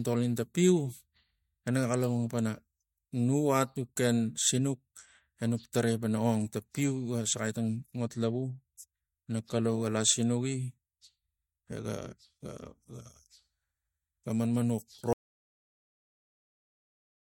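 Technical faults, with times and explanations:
15.13 s to the end, audio dropout to silence: the input feed was likely lost while the recorder kept writing zeros. Just after "ga manmanux" the speech stops mid-flow, leaving 2.1 s of complete silence with no room tone beneath it.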